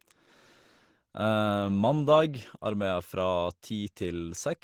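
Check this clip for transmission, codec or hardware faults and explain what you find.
One fault runs through the whole recording: Opus compression, likely at a low rate around 16 kbps in the codec's hybrid mode. The damage is plainly audible. The speech comes across hoarse and muffled, with a grainy, rough texture on voiced sounds rather than the swirling of MP3. Hybrid mode codes the lower band as a speech model and fills the upper bands with coarse energy or noise. On a spectrogram, content reaches about 20.3 kHz but the highs look smeared and noise-like, without distinct holes.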